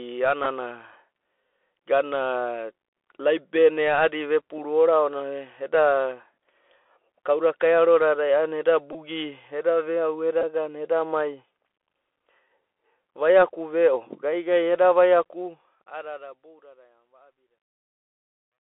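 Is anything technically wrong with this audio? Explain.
Yes. The speech is band-limited, scratchy, and carries a grainy hiss throughout. This is the Bluetooth CVSD headset codec, the narrowband format Bluetooth headsets use. It encodes the signal as a stream of single up-or-down bits and adapts its step size as it goes. Nothing outside roughly 300 Hz to 3.4 kHz survives. Sibilants turn rough where the steps can't keep pace with fast high-frequency movement, and that stepping process leaves a granular noise floor under the speech.

Four brief glitches come from a Bluetooth headset packet repeated. There is a short buzz at 0.44 s and another at 6.84 s. Longer buzzy stutters run from 8.93 to 8.96 s and from 10.41 to 10.44 s. Each happens when voice packets from the headset were lost, about 11, 8, 19 and 15 ms' worth, and the chip decoded the previous packet again. Repeating that 3.75 ms block gives a brief buzz near 267 Hz.

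From 15.19 s to the end there is truncation distortion on a fade. The speech turns gritty as the smooth fade-out, which runs from about 15 s to 18.6 s, gets quieter. From 16.79 s onward it is at its worst. The fade stage kept too few bits, which fits a 12-bit path, and added no dither. The quietest part of the waveform therefore collapses into a few coarse square steps.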